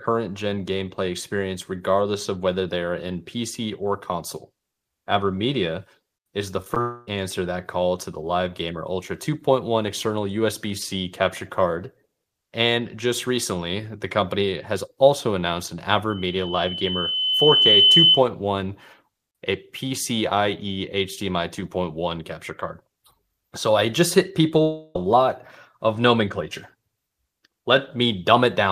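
Right after "is the", around 6.62 to 6.67 s, you get two back-to-back bits of short concealed packet loss, then another at 6.75 to 6.77 s. Each is about 10 ms of missing audio that the receiver papered over by extending the last bit of sound and crossfading back in. They come across as quick little smears or wobbles rather than clean gaps, and anything short like a consonant in that spot can just disappear.

Hard on the heels of those, from 6.81 to 7.08 s, there's what's likely a long network dropout. Roughly a quarter second never arrived, and the decoder bridged the whole stretch by continuing the last sound, so there's no silence, just a buzzy or hissy carry-over that fades before the real audio picks up again further along. Same story at 24.62 to 24.96 s: after "I just hit" about a third of a second goes missing to a fading synthetic fill, and things resume at "lot of nomenclature" with that chunk simply gone.

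In between, right after "has also announced an", there's loudspeaker feedback squeal from 16.10 to 18.23 s. A single tone at 3 kHz, where the mic-to-speaker loop gain tipped above one, swells up over about a second and a half until it sits around 10 dB above the speech. It's a squeal that hangs on for about half a second more before it cuts out.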